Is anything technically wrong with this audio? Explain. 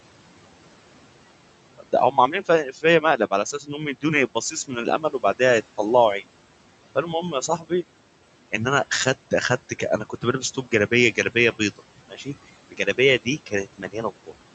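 Yes, there are two related faults from noise suppression.

Noise suppressor artifacts run through the whole clip. The suppressor pulls the steady room noise down by about 18 dB frame by frame, so the background sinks in the gaps and swells under the speech.

Speech cut by the noise suppressor occurs at 1.78–4.04 s, 4.35–5.4 s, 7.32–7.71 s, 9.69–12.28 s and 12.7–14.42 s. Mistaking quieter speech for noise, the suppressor dips it by about 12 to 18 dB, roughly half a second at most per span, so soft sounds come out swallowed. The room noise itself sits about 18 dB below the speech, and the call audio is band-limited near 8 kHz, consistent with Opus at around 64 kbps.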